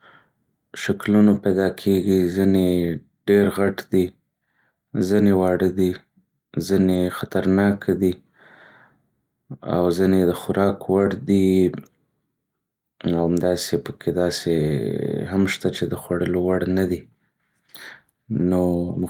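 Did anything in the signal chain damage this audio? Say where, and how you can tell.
Yes, network stage: a lost packet rebuilt from error correction at 6.93 and 16.77 s. Each is a rough, noisy 20 ms patch with no gap, decoded from the next packet's low-bitrate copy.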